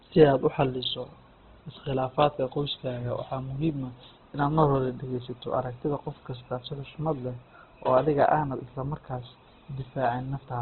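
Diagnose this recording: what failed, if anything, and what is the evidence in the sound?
Throughout the speech, the sound is grainy and rough, with voiced sounds turned noisy rather than swirling, and nothing is heard above about 4.2 kHz, giving a narrow, boxed-in band. The stage is the codec, likely Opus compression in its music (CELT) mode at a starved rate that fits roughly 12 kbps. Band energies survive, but their fine detail is rebuilt from folded lower bands or noise, and the bandwidth has been cut back to narrowband.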